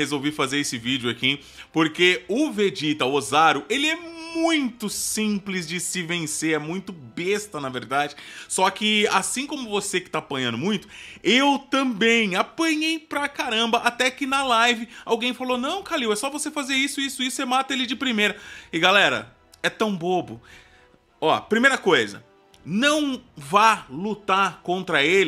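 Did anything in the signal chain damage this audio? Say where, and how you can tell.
No, nothing in the signal chain audibly damaged this audio. I can't point to any mark on the sound from any stage between capture and playback.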